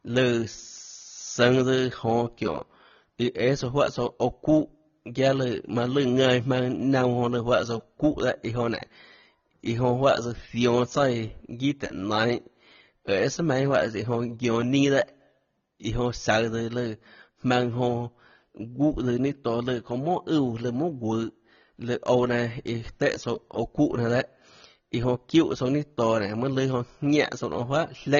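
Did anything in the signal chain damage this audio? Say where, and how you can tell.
Yes. A block size mismatch (truncated) at the driver or buffer stage puts a steady 100 Hz buzz under everything, as each block's tail gets dropped. The speed stays normal.

The speech sounds plainly dull and smeared, with nothing above 6.9 kHz. That's likely AAC compression at the codec stage, with the damage fitting a low bitrate around 24 kbps.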